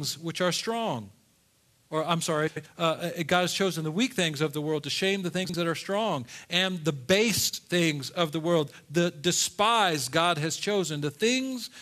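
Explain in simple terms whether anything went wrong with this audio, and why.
Frames out of order at 2.47 to 2.67 s, 5.44 to 5.54 s and 7.49 to 7.59 s: two neighbouring chunks of audio were played in swapped order, the second half first. That creates a brief garbled flutter, though no sound goes missing.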